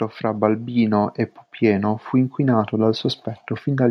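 From 0.21 s to 3.11 s there's automatic gain rising: the AGC decided the input was too quiet and eased its gain up about 6 dB, so the speech and background swell together.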